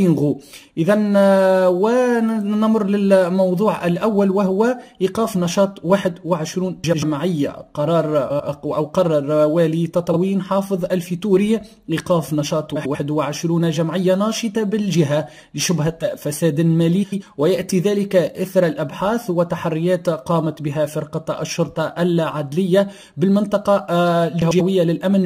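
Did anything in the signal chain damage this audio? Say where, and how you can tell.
Yes: frames out of order, in transport or storage before decoding. At 6.84, 8.30, 10.11, 12.76, 17.03 and 24.42 s there's a short garbled flutter. Two adjacent blocks, about 93 ms each (23 ms at 10.11), play swapped, with no time lost.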